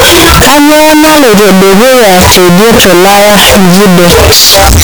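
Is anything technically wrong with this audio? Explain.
Yes, there is one serious fault, and it runs through the whole clip. Float read as integer: the speech is very loud and harsh throughout, with background noise as loud as the talking, though pitch remains traceable. The likely cause is 32-bit float samples being read as 32-bit integers, so sign and exponent bits dominate. The waveform looks like a dense near-square block at an almost fixed, high level, and the spectrogram shows broadband energy smeared everywhere.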